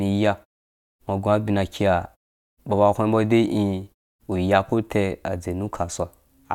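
Nothing stood out on listening to this speech recording.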